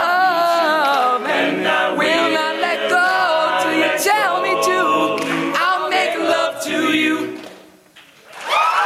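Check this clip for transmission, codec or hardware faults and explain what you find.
One fault runs through the whole clip: gain pumping. The gain swings by about 10 dB. The likely cause is gain set far too high, with a fast limiter clamping each peak. Loud and soft parts sound squashed together.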